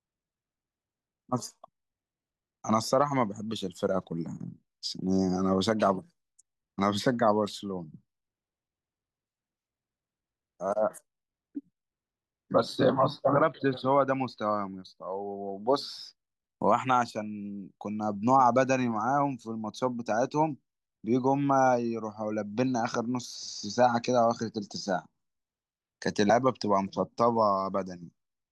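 At 26.29 s, damaged data in the compressed stream corrupts a frame, so the decoder misreads it, loses sync and hunts for the next valid frame header. The result is a brief glitch that cuts across the speech.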